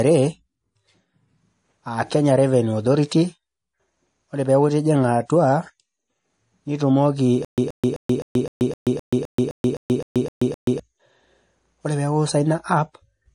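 From start to finish, the speech carries stacked lossy-codec artefacts, with smeared, watery highs and a dull grain layered together. This points to transcoding between lossy codecs, likely a low-rate MP3 re-encoded to WMA. On a spectrogram, everything stops flat at about 10.6 kHz.

From 7.45 to 10.80 s comes stutter with silent gaps: a 127 ms burst repeats 13 times, each followed by 131 ms of digital silence, every 258 ms. The likely cause is a stalled stream replaying its last fragment. The waveform shows evenly spaced identical blocks separated by flat lines.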